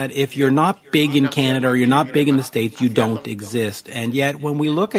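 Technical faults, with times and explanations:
Throughout: echo with no canceller. Every phrase of the speech is followed by a faint second copy arriving about 0.4 s later, about 28 dB below the original. The far end is playing the call through a loudspeaker. Its microphone picks that sound up and sends it straight back, and nothing removes it. The returning copy has crossed the network twice and passed through a room, so it sounds thin, trailing each phrase.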